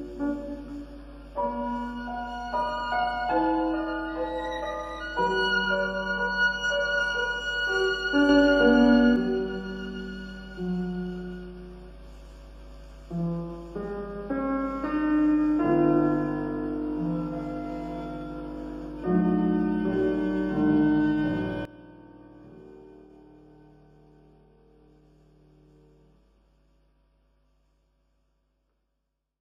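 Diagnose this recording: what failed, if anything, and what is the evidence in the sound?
Sudden gain jumps, likely unramped digital gain: the waveform envelope and noise floor step up about 6 dB at 8.29–9.16 s, then down about 17 dB from 21.65 s.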